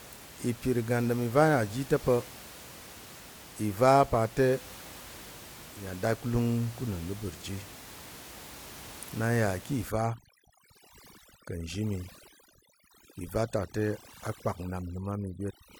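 The speech runs over room noise sitting about 19 dB below it, until overdone noise removal takes hold from 9.89 s to the end of the clip. A noise reduction stage set too aggressively starts pulling individual frequency bands down or out whenever they sit near its noise estimate. The background drops and breaks up into twinkling specks, and the quieter components of the speech are cut along with it.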